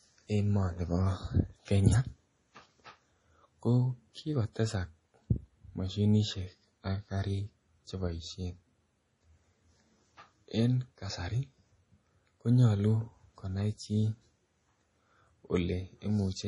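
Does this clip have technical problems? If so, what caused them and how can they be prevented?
Yes. MP3 compression is the likely cause, with a bit budget so starved that it fits a 32 kbps encode. The encoder discards everything above 10.6 kHz and lets weak frequency lines flicker frame to frame. Throughout the speech, that gives a dull, watery, swirling sound with metallic chirps on s sounds and smeared attacks. Encoding at 128 kbps or higher, or keeping a lossless original, would prevent it.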